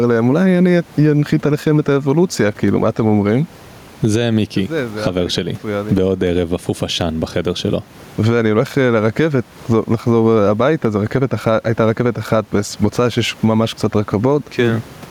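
Throughout the speech, level swells and ducks by around 10 dB on each loud sound, squashing dynamics: gain pumping, likely from excessive gain with a fast limiter; room noise sits about 34 dB below.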